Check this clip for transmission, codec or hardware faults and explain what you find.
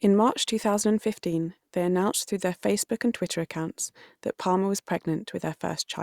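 Nothing stood out on listening to the speech in this clip.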